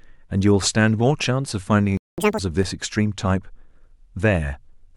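A speech clip. The player likely ran short of data or had its thread blocked, causing a playback stall: the speech goes silent from 1.97 to 2.18 s, a gap of about 0.21 s. To recover the lost time, the player then resampled its backlog at double speed, a catch-up at higher speed: from 2.18 to 2.39 s the speech runs twice as fast and jumps by roughly 10 semitones before returning to normal. At 2.63 s the output buffer emptied and the converter held its last sample for 5 ms, an underrun with held sample: the waveform flatlines briefly, and a few milliseconds of live speech were dropped.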